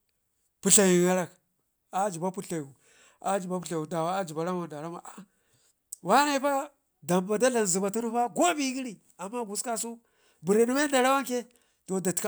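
No technical faults can be heard anywhere in this speech recording; the signal stays continuous and intact throughout.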